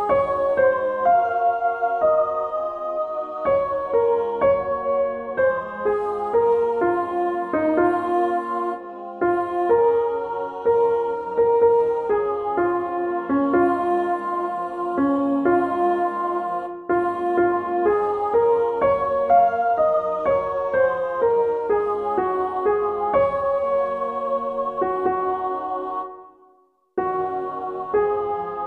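No technical faults can be heard at any point in the clip, so there is nothing to describe in time order.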